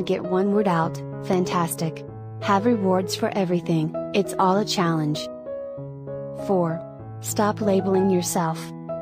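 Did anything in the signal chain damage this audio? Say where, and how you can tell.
Yes. Two sharp loud pops land in quick succession between 1.33 and 1.54 s, standing out at roughly 10 dB above the surrounding level while the sound carries on underneath without a break. That pairing of hard transients laid on top of intact audio points to the analogue wiring stage, the likely cause being a voltage step from a plug, switch or static discharge that the downstream circuitry shaped into a brief thump.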